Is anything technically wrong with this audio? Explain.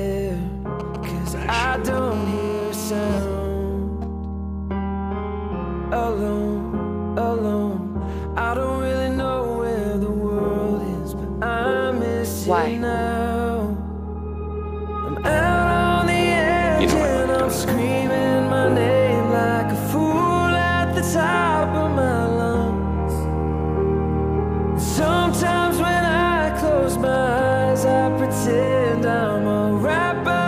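Yes, there's 2G phone interference in two stretches, one right after the other.

From 0.80 to 1.99 s you get GSM signalling bursts. A nearby phone is firing off short groups of radio bursts, as it does during network signalling, and the audio circuitry rectifies them. That gives a galloping dit-dit-dit of brief 217 Hz buzzes, sitting roughly 15 dB below the signal.

Then from 2.12 to 3.18 s it turns into a full GSM phone buzz. The phone is now transmitting continuously at 217 bursts per second, as in a call, and those rectified pulses become a steady, hard, raspy 217 Hz buzz with lots of harmonics, about 14 dB below the signal.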